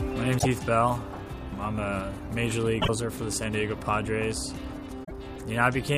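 The audio has damaged data in a compressed stream. Short disturbances break through at 0.35–0.46 s, 2.78–2.89 s and 5.03–5.11 s. Corrupted bytes there make the decoder misread frames and lose sync. It then hunts for the next valid frame header.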